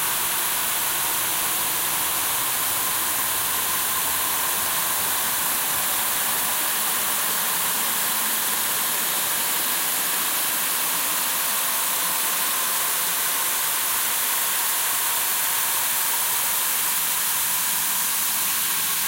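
Sample clock jitter runs throughout: an unstable converter clock of roughly 5 µs adds gritty hiss tracking loud, bright sounds, showing as broadband haze near transients on a spectrogram.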